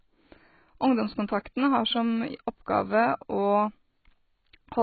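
From start to finish the speech is cut off above about 4.5 kHz and sounds dull, with a warbling, watery smear on vowels and fizzy sibilants. This is likely heavy AAC compression at a bitrate near 16 kbps. The warble separates it from a plain low-pass filter.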